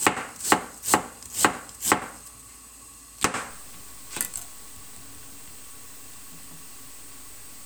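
Low bit depth without dither runs from 3.51 s to the end at 7.65 s. The sound likely passed through truncation to about 7 bits with no dither, so the error tracks the signal. Quiet passages turn gritty, with grainy distortion roughly 20 dB below the sound.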